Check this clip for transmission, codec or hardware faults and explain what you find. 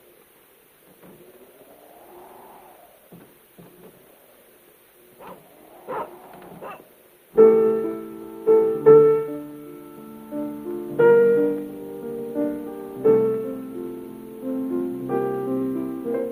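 Nothing stood out on listening; no transmission, codec or hardware problem could be heard anywhere in the clip.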